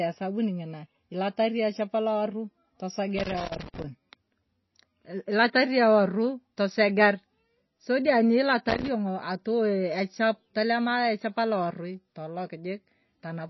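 Speech throughout sounds dull and watery, with nothing above 5.8 kHz and swirling, smeared consonants: likely MP3 compression, pointing to a bitrate around 24 kbps. Irregular bursts of scratchy crackle cut in from 3.18 to 3.84 s and from 8.69 to 8.88 s, the loose connector crackle of a dirty contact making and breaking.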